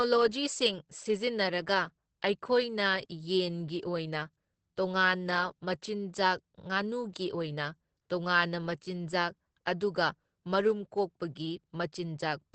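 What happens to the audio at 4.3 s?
At 4.3 s the speech carries Opus voice compression, which runs through the whole clip. The SILK linear-prediction coder codes the excitation coarsely, a heavy loss that fits about 10 kbps, so the speech sounds hoarse and slightly robotic. That graininess, on top of the missing content above 8.6 kHz, sets it apart from a plain low-pass filter.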